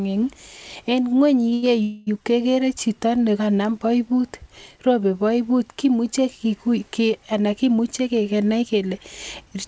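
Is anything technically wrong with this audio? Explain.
Yes. The speech has timing faults from a call path. It passes through a call codec, and nothing is heard above 8 kHz, which fits G.722 at 64 kbps.

Short stalls from a late packet come at 1.50 to 1.54 s and 1.54 to 1.64 s. A packet was not there when due. The jitter buffer ran empty. The receiver stretched the last sound, for 17 ms and then 88 ms, until data arrived. Nothing is lost. The sound is just held too long, with a slight buzz.

A call audio freeze follows from 1.82 to 2.09 s, just before "kekere chito nekanam boibut". For 242 ms the last sound is carried on as a fading buzz. It never drops to silence. The likely cause is packets held up in transit, draining the jitter buffer. When they arrive, speech resumes where it stopped. A gap is inserted, but nothing is missing.

A jitter buffer speed-up runs from 7.63 to 8.91 s, right after "ki ana". 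The buffer had built up extra delay. To cut it, the receiver removed short pitch-period pieces many times in a row, about a tenth of a second in total. Speech runs at about 108% speed with unchanged pitch. It sounds hurried.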